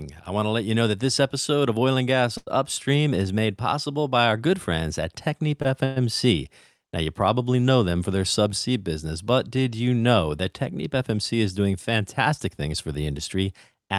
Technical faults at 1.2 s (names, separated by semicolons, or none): none